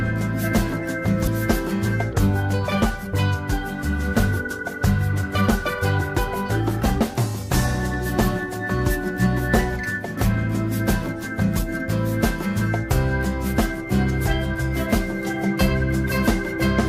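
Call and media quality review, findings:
Skip ahead at 1.27–1.29 s: about 0.4 s of audio is missing and joined with no gap. This fits a jitter buffer discarding overflow. On the spectrogram it shows as an abrupt seam with no silent column.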